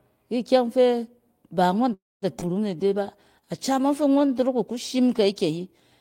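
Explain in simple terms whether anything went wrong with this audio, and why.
Yes, three things go wrong in this speech clip.

At 1.93 s, right after "ikyɛng fɛ ba ngↄn", there is a call audio freeze. The sound stalls for about 0.29 s, with a brief fading tail and then roughly 0.22 s of silence. The likely cause is delayed packets leaving the receiver with nothing to play. Unlike a skip, nothing is lost: the speech resumes exactly where it stopped, just late.

At 2.40 s comes a skip ahead, the opposite case. There is almost no gap, but roughly a tenth of a second of speech is simply gone, and the two sides are spliced together abruptly. It sounds like a jump rather than a pause.

From 2.76 s to 4.29 s, leading into "dorok ku shim", a jitter buffer slow-down stretches the speech. Tiny pieces are repeated to rebuild a reserve, adding about 0.12 s. That makes this stretch play at about 93% speed while the pitch stays the same, so sounds come out slightly drawn out rather than broken by a pause or a jump.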